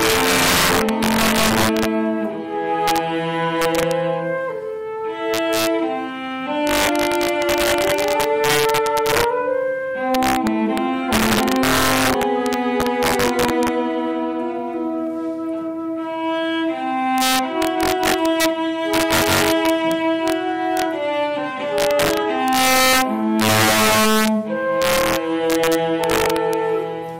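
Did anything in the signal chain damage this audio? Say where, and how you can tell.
Yes: integer overflow in the sample-format conversion stage, driven about 8 dB hot, wraps peaks (around 2 percent of samples) to the opposite sign. Violent cracks throughout.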